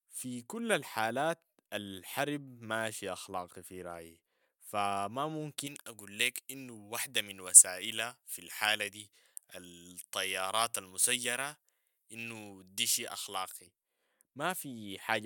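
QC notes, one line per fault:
5.67–13.67 s, pre-emphasis left on after "أخلاقي في رأيي فما": treble lift never de-emphasised, about 11 dB at 10 kHz, fitting a J.17 curve, so speech turns thin, bright and sibilant.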